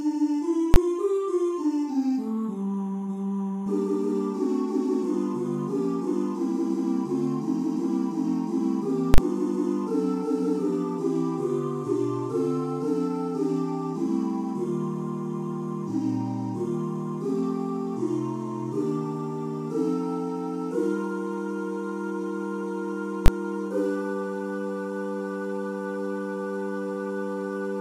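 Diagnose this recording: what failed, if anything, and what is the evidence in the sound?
Invalid numbers at full scale, in the processing chain before sample-format conversion: hard bangs at 0.74–0.76 s, 9.14–9.18 s and 23.26–23.28 s. A calculation produced infinite or invalid values, which were clamped to full scale for 20 ms and 40 ms blocks, giving abrupt pops with no sound between.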